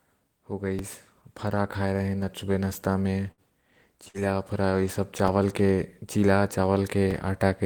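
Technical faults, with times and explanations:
0.79 s, 5.28 s and 7.11 s: DC step. Each time the waveform's zero line jumps abruptly, giving a brief low thump. The offset then drains away slowly, as through a 2 Hz high-pass, while the speech continues intact. Unlike a dropout or click from damaged samples, nothing is lost.
3.31 to 3.51 s and 4.08 to 4.17 s: burst of packet loss. About 60 ms of speech goes missing each time. The receiver bridges it with roughly 55 to 65 ms of the last sound stretched and fading into a buzz or hiss, then resumes further along. Unlike a plain dropout, the gap is filled rather than silent.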